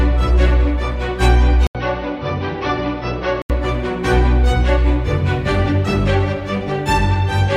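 From 1.67 to 3.50 s, likely an input switched to a poorer device: an 80 ms gap, then duller sound cut above 6.1 kHz, slightly quieter, with new background noise, unlike simple filtering.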